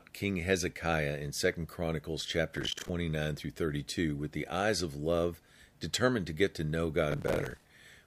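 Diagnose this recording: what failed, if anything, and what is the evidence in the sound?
Processor overload crackle, at the driver or buffer stage: gritty tearing from 2.57 to 2.89 s, and again from 7.12 to 7.70 s right after "to get to know". Buffers of roughly 10 ms keep missing their deadlines, so scraps of old audio get replayed with hard edges, one after another.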